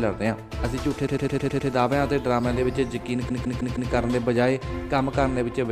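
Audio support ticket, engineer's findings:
Repeated frames, 1.06–1.69 s and 3.28–3.91 s: stutter. First, a 104.5 ms block replays 6 extra times; second, 156.7 ms replays 4 times. Waveform shows identical tiled segments. Writer/transport resending compressed frames; adds 0.63 s each.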